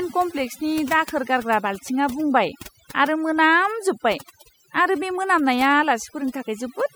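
Noise reduction was set too strong across the whole recording, so overdone noise removal shuts individual frequency bands down whenever they sit near the noise estimate. The background drops and breaks up into twinkling specks, and quieter parts of the speech vanish.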